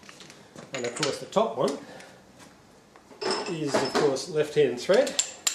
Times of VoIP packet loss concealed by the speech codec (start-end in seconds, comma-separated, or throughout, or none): none